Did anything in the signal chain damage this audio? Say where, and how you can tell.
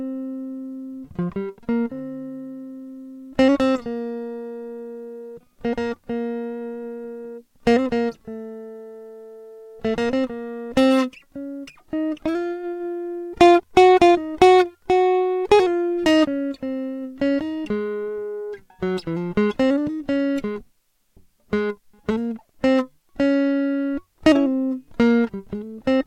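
No, no damage is audible.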